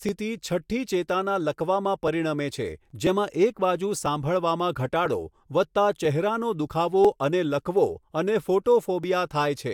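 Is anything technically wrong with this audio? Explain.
Yes. Periodic USB or driver dropouts recur about once a second from 0.09 s to 9.04 s, roughly ten times across the speech. At each one, a background task stalls the audio path and a few milliseconds of signal are skipped outright, so the waveform jumps abruptly where the ends are spliced together. Each splice is heard as a tick while sound is present. On a spectrogram these appear as thin, evenly spaced vertical broadband lines.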